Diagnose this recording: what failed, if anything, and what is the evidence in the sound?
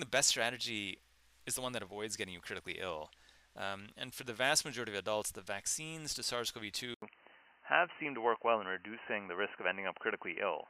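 The failure sits at the capture stage. At 6.94 s the sound drops out for about 80 ms. When it returns, nothing above 3 kHz remains, so it turns dull and boxy through to the end. The level shifts by roughly 5 dB, and a new, faint background noise appears, some 50 dB below the signal. This is likely an input switched to a poorer device. A narrower-band microphone or headset profile replaced the original input mid-recording.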